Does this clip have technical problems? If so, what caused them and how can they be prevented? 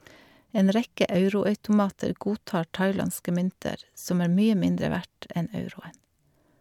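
No, this clip has no technical problems, so there is nothing to prevent.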